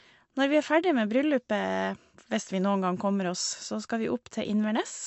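Throughout, the speech sounds plainly watery and swirly, with nothing above 8 kHz, likely MP3 compression starving bits and dropping weak frequency lines, which fits roughly 51 kbps.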